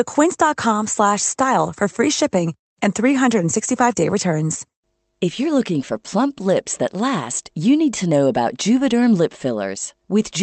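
No technical faults are audible.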